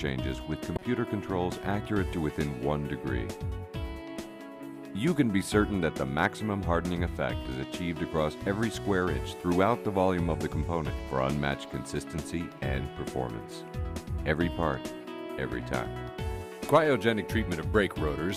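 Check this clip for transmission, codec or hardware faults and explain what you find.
One codec fault is present, a corrupt frame decoded near the start. From 0.76 to 0.82 s, a short burst of wrong-sounding energy cuts into the audio, a chirp or blip lasting about 60 ms, with the spurious content peaking around -20 dBFS. The cause is flipped bits inside compressed frames that the decoder still played. Misread gains or codes placed energy at incorrect frequencies for the span of the damage, which fits about two consecutive frames being hit.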